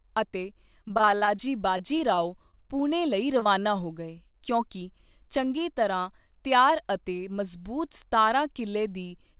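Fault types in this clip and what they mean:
Repeated packet loss (robotic sound), 0.78–1.50 s and 1.78–2.55 s: packets kept arriving lost or late, and each hole, up to 40 ms, was patched by stretching the previous sound. About a third of the first stretch is patched, so it turns choppy. About a tenth of the second stretch, ending at "ਪੁਣੇ ਲਈ", is patched.
Short concealed packet loss, 3.39–3.47 s: just after "ਪੁਣੇ ਲਈ" and before "ਹੋ ਗਏ ਕਿਉਂਕਿ", two back-to-back 20 ms chunks never reached the decoder in time. The receiver bridged them by continuing the last sound, then blended back in, leaving a brief smear in the speech.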